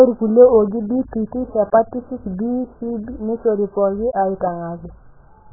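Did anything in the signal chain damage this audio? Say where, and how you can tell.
Yes, at the codec stage. The speech is dull and smeared throughout, with nothing above 1.7 kHz. That points to a very low bitrate, likely heavy AAC compression.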